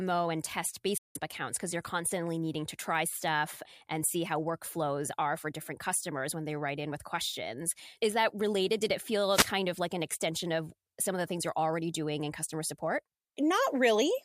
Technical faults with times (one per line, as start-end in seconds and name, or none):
0.97-1.17 Bluetooth dropout
9.30-9.50 wireless microphone noise hit